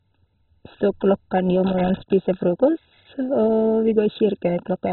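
Throughout, the speech sounds dull and gurgling, with nothing above 4 kHz and a granular grit, likely from heavy MP2 compression at a very low bitrate, around 16 kbps, shutting off upper sub-bands. From 1.66 to 2.13 s, an irregular burst of scratchy crackle chops the signal: loose connector crackle, a worn contact making and breaking as it moves.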